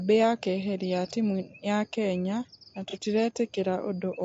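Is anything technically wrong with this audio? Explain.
Yes, there are two problems.

Low-delay AAC compression runs through the whole clip. The speech sounds plainly rough and grainy, with a hashy noise filling the gaps between the pitch harmonics. The likely cause is AAC-ELD encoding, the low-delay variant used for calls. Its low-delay window limits frequency resolution for the harmonic structure of a voice, and at a low bitrate too few bits remain for clean coding. The degree of damage fits a bitrate around 32 kbps.

AAC frame loss with concealment occurs from 2.90 to 2.95 s, right after "timũ ya kenya na". The sound briefly turns smeared and noisy, then recovers. This matches about 30 ms of missing audio, consistent with a single lost frame. The decoder filled the gap by reusing the last good spectrum with altered phase or interpolated energy, producing a plausible but inaccurate patch instead of silence.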